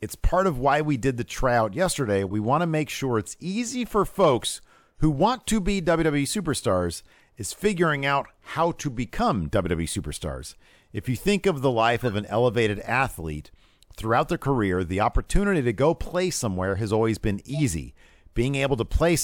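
A speech clip with three corrupt frame decoded bursts: 2.28–2.33 s after "did the tryout yesterday", 11.98–12.12 s, and 17.49–17.60 s. Each is a short misplaced-energy glitch from damaged frames played anyway, peaking around −30 to −20 dBFS.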